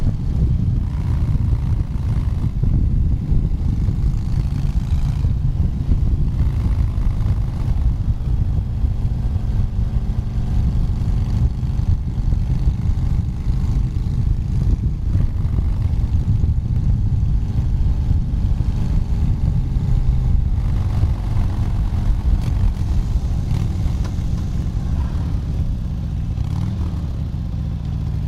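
From 16.76 to 24.62 s a doubled audio track sounds like a dry, hard echo: a full-band copy about 300 ms late and roughly 5 dB quieter, likely from a slower second capture path. Spectrogram and waveform show each event repeated once, starting and stopping abruptly.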